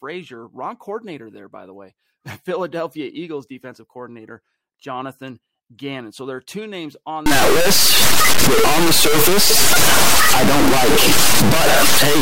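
From 7.26 s to the end of the clip, the speech turns into buzzy distortion, most likely from a stuck bit: one bit of each sample held at a fixed value. Here it is a high bit, with a step of roughly -5 dBFS, so about half the samples jump by that large amount and pauses fill with noise. On a spectrogram, broadband energy covers the whole band from 7.26 s, and the gaps stop going dark. The waveform shows samples displaced by one constant step.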